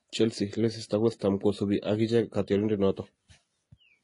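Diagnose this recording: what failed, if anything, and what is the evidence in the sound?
The codec stage failed. Throughout the speech, the content stops dead at about 10.6 kHz. The artefacts of each codec sit alongside one another, and the two kinds of damage are heard together. The likely cause is transcoding between lossy codecs, consistent with a low-rate HE-AAC encode re-encoded to MP3 at a modest bitrate. The second encoder spent bits on the first one's artefacts, and the lower cut-off survived. A spectrogram shows a flat ceiling near 10.6 kHz and blotchy, patchy upper bands.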